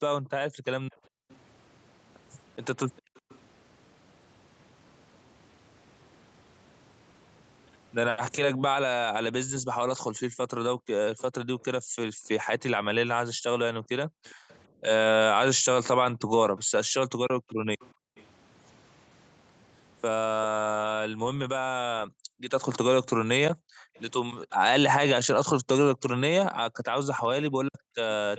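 Background gated by the echo canceller appears from 0.50 to 3.23 s, 9.51 to 18.16 s and 22.07 to 27.96 s. While the loudspeaker side plays, the canceller clamps the microphone down by up to about 40 dB, so the room sound drops out in brief gaps and returns when it releases.

Echo leak overlaps these, from 0.93 to 3.39 s, 14.26 to 18.25 s and 23.95 s to the end. A faint, delayed copy of the speech trails about 0.4 s behind (401 ms, later 391 ms), roughly 25 to 30 dB below it, likely residue the loudspeaker side's canceller failed to remove and sent back.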